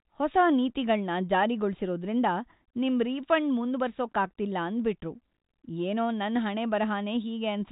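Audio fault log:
No fault to log.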